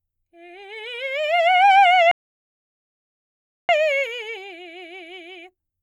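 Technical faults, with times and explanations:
2.11 to 3.69 s, rebuffering stall: the music halts and drops into complete silence for about 1.6 s, then picks up at exactly the point where it broke off, with nothing skipped. The player had used up all the audio it had downloaded and waited for more to arrive, so the gap adds time without removing any. On the waveform this is a flat line between two intact stretches; on a spectrogram, a clean empty vertical band across all frequencies.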